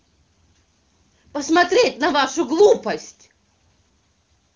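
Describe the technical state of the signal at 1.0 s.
At 1.0 s the speech is intact, carried cleanly by the AMR wideband (HD Voice) codec at 23.85 kbit/s with its band limit around 7.2 kHz and no audible fault at that moment.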